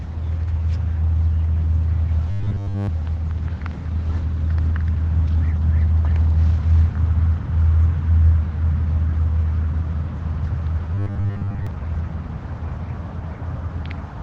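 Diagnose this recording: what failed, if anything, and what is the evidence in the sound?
Robotic sound from repeated short buffers, at 2.31 to 2.89 s and again at 10.95 to 11.67 s. In both spans the sound turns into a rigid, metallic buzz at 100 Hz that only loosely follows the original. The stage is likely the driver or buffer. New audio arrives too slowly, so the last short chunk is replayed to fill the gap. A 100 Hz buzz fits a 10 ms buffer. Most of the real audio in those spans is skipped.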